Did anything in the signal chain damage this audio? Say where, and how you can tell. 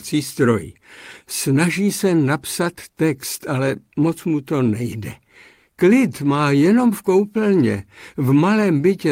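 No, nothing audible points to damage at any stage of the signal chain.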